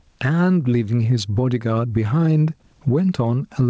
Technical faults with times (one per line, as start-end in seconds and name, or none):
0.00-3.69 gain pumping